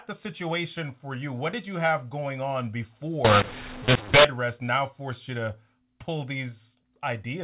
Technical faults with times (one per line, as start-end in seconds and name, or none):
3.25-4.25 mu-law and A-law mixed up